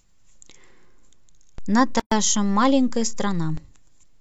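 A speech recording with two faults. At 1.58 s a low thump marks a DC step, where the waveform's zero line jumps to a new offset and holds until about 3.57 s, when a second thump marks its return; the speech itself carries on unaltered across both steps. Inside that span, from 2.00 to 2.12 s, the speech drops out for about 119 ms with smeared edges, then resumes where it left off. This is a gap at a join of encoded pieces: separately encoded segments were spliced without trimming the encoder's start delay and end padding, leaving silence at the seam, with joins every 4 s.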